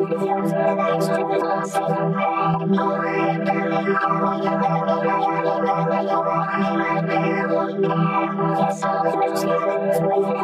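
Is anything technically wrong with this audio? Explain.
Yes. Compressed frames are skipped at 1.4 s and 9.13 s: whole 26.1 ms frames never reach playback, so the audio jumps ahead, roughly two frames (about 50 ms) at the first point and three (about 70 ms) at the second, each joined by a short smeared blip.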